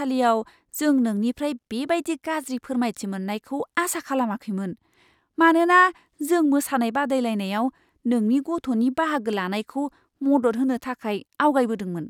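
No technical faults are audible.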